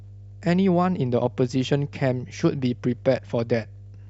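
Mains hum runs under the speech from start to finish. It is a steady low tone at 50 Hz, with some low harmonics above it. A ground loop or nearby transformer has likely leaked the power line into the signal. It sits roughly 20 dB below the speech.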